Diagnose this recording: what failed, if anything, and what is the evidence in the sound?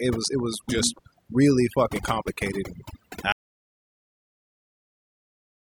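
Overdone noise removal in call processing runs throughout: bands near the noise estimate are pulled down, leaving near-silent background with twinkling specks.

A train of clicks from 0.10 to 0.99 s, about seven at a regular 6.8 per second and roughly 5 dB above the speech, likely comes from interference on the analogue wiring.

An audio dropout to silence starts at 3.32 s after "really fucking complicated and" and lasts to the end. It is silent with no room tone, likely from a lost input device.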